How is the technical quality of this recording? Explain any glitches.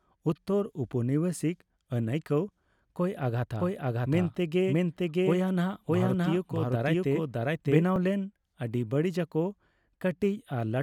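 The recording has two glitches close together in the speech.

From 3.59 s to 7.83 s, the speech is heard twice: a second, equally loud copy trails the first by roughly 0.7 s, with no reverb or tonal change, and it cuts in and out abruptly at both ends. This is a doubled audio track. The likely cause is the same signal being captured a second time through a slower path, or an edit leaving two copies overlapping out of step.

At 7.96 s there is a small jump in the sound, and no gap of silence. This is a dropped buffer (overrun). The program likely failed to read its samples before the hardware overwrote them, so a few milliseconds of audio were lost and the surrounding audio was joined directly, producing the discontinuity.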